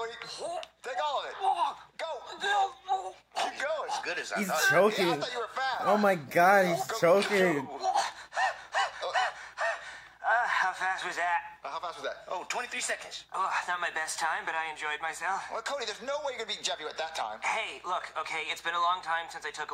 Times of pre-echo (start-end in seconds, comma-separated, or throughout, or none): none